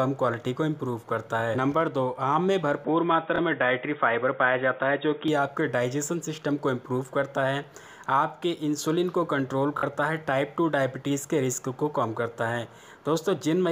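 From 2.85 to 5.28 s the input likely switched to a poorer device: the signal suddenly comes through a narrower channel with nothing above 3.8 kHz, so the sound turns dull and boxy, with faint new background noise but no gap or level jump at either change.

Inside that stretch, at 3.36 to 3.38 s, a Bluetooth stutter occurs. Late audio data left the receiver replaying its last buffer, so about 23 ms of sound repeats as a brief hiccup before playback jumps ahead. A longer stutter at 9.78 to 9.83 s replays about 46 ms, which fits two lost packets, and gives a short machine-gun rattle.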